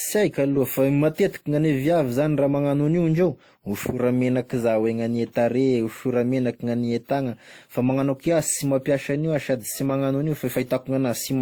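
Speech that has most likely gone through transcoding between lossy codecs: an older WMA-type encode, consistent with about 64 kbit/s, was re-encoded as Opus at what fits roughly 32 kbit/s. For the whole clip, the second encoder spends its limited bits re-coding the first one's artefacts while adding its own. The two codecs' different artefacts are therefore heard layered together, and nothing remains above 20.2 kHz.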